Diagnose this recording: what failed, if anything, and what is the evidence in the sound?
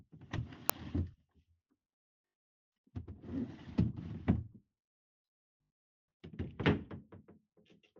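Uninitialised buffer at 0.70 s, a driver or buffer-stage fault. There is a single, very brief, loud crack about 1.3 ms long, which fits a 64-sample block. One audio block reached the output before any samples had been written into it, so whatever data was left in that memory was played as audio. The result is an abrupt, unrelated spike rather than a distortion of the surrounding sound.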